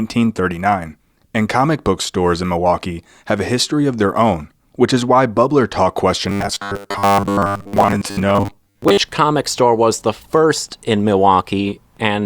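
From 6.29 to 8.97 s the speech turns into a rigid metallic buzz at 100 Hz, robotic sound from repeated short buffers, likely from late audio being filled with repeated 10 ms segments, ending just before "comic store was the".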